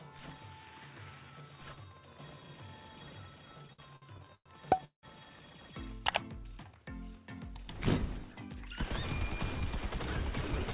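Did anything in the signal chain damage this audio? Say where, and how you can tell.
Yes. There are repeated stalls (stutter) at the network and jitter-buffer stage, from 3.68 to 5.05 s. Nine gaps were filled by stretching the last sound, about a third of that stretch, the longest 182 ms. Packets arrived late, so playback dragged, but nothing was lost.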